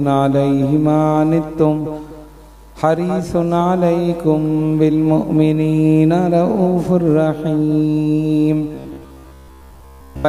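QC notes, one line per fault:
8.75–10.28 s, robotic sound from repeated short buffers: most of the audio is replaced by a fixed 66.7 Hz buzz, likely from one 15 ms chunk repeated, showing as evenly spaced harmonics and identical waveform cycles.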